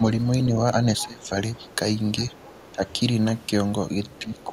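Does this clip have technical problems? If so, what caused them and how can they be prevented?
Yes. Speech suppressed in double talk: the speech dips at 0.00–0.06, 0.96–1.38, 2.72–2.85 and 4.19–4.53 s, by roughly 5 to 15 dB. This is likely an echo canceller ducking both talkers when they overlap. Better double-talk detection, or a headset, prevents it.

Other side's voice leaking through: a faint second voice, roughly 25–30 dB down, is audible at 1.21–1.29, 1.57–1.73, 2.18–2.68 and 4.15–4.44 s. This is likely loudspeaker sound the canceller missed. Unlike room reverb, it does not trail the talker's own speech. Headphones or a better-converged canceller would stop it.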